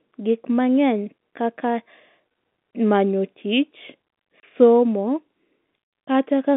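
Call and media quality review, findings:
Packet loss filled with silence at 2.71–2.73 s and 4.40–4.43 s: hard-edged 20 ms and 30 ms dropouts, consistent with 10 ms packets replaced by silence on a G.711 telephone-band path.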